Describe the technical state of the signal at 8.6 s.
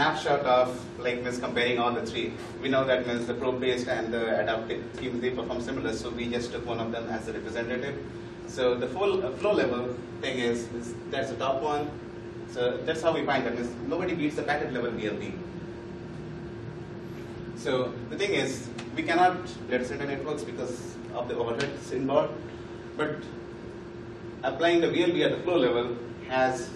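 No technical fault is audible at 8.6 s, and the signal there is intact.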